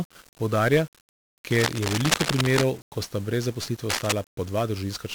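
Across the whole speech clip runs heavy 1-bit DFPWM compression. With only one bit per sample steering an adaptive level, the coarse fuzz points to a rate around 48 kbps. Unlike steady background hiss, this grainy crackle rides on the speech itself and buries its treble.

From 1.50 to 2.64 s, and again from 3.89 to 4.13 s just after "sta brez", cable scratch noise breaks in, about as loud as the speech. The likely cause is a worn cable or connector being moved. It is a dense, uneven scratching rustle, not isolated clicks or the codec's constant grain.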